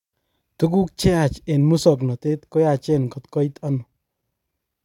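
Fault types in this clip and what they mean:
No fault types are present in this clip.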